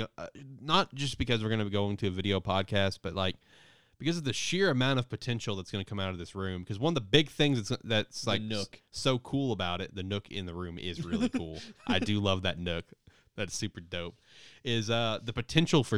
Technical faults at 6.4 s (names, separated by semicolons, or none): none